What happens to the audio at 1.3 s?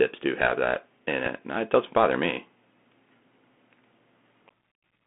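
At about 1.26 s there is a Bluetooth headset packet repeat. One voice packet between headset and phone was lost, about 3.8 ms of sound. The chip decoded the previous packet's bits a second time in its place. Because only one packet was repeated, it is heard as a small, brief tick. The audio also carries the Bluetooth CVSD headset codec at this point. The band is limited to roughly 200 Hz to 3.4 kHz. The coding damage is plainly audible, with scratchy s sounds and a granular hiss under the speech.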